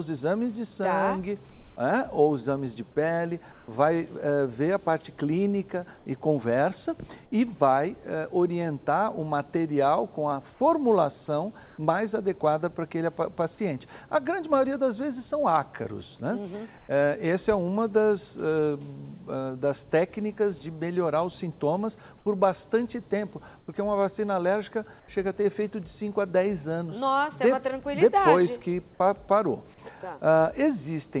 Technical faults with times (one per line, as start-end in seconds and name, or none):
1.50-1.76 comfort noise in place of the background
3.52-3.68 comfort noise in place of the background
5.98-6.06 comfort noise in place of the background
11.66-11.78 comfort noise in place of the background
16.78-16.88 comfort noise in place of the background
22.18-22.26 comfort noise in place of the background
23.60-23.68 comfort noise in place of the background
25.00-25.08 comfort noise in place of the background